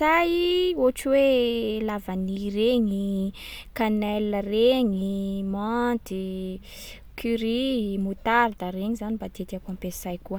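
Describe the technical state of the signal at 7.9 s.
At 7.9 s the speech signal is intact, with no audible dropout, clipping, glitch or other technical fault at that point.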